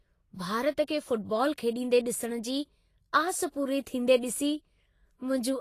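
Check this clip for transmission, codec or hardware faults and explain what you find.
One codec fault runs through the whole clip. It is plainly audible. The sound matches Vorbis compression, likely at a low setting, which fits a bitrate around 33 kbps. Nothing reaches above 14.2 kHz. At this quality the encoder keeps a smooth spectral envelope but quantises the upper detail coarsely. That detail turns into noise of similar energy. The speech sounds hissy and grainy. Tones are roughened, and consonant attacks are smeared.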